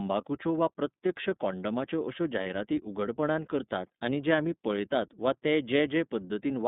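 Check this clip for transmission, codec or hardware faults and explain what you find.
Two faults are audible in this speech clip, one throughout and one brief dropout.

iLBC codec, throughout: audio is confined to roughly 150 Hz to 3.7 kHz with a rough, synthetic edge. The plainly audible coarseness fits iLBC's 13.33 kbps, 30 ms frame mode, not simple band-limiting.

Lost iLBC frames, 2.43 to 2.47 s: a single lost 30 ms frame was concealed by repeating the last pitch cycle with noise, giving a brief buzzy hold. Unlike a plain dropout, there is no silence, and recovery is immediate.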